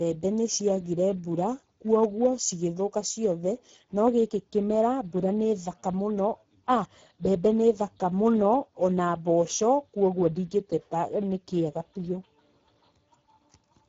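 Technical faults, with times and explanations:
Throughout, Speex codec: the speech has a plainly audible coded character, grainy and somewhat hoarse, with nothing above 7.7 kHz. Speex is a CELP coder, which models the vocal tract with a filter and spends its remaining bits on an excitation signal. At this quality there is too little data for an accurate excitation, so the fine detail of the voice is replaced by an approximate, noisy buzz. The amount of damage fits a bitrate of around 10 kbps.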